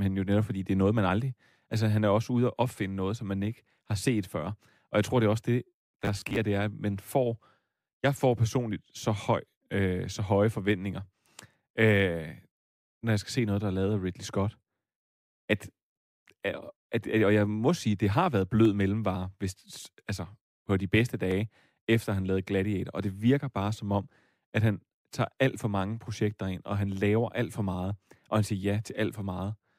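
New audio was likely arriving too seldom, so the playback software kept filling the gaps by repeating the last short buffer of this speech clip while the incoming material was skipped. From 5.85 to 6.4 s this produces robotic sound from repeated short buffers: around two fifths of that stretch is repeated material, and the looping imposes a fixed buzz at 100 Hz, which fits a 10 ms buffer. The voice turns metallic and rigid there, only loosely following the speech.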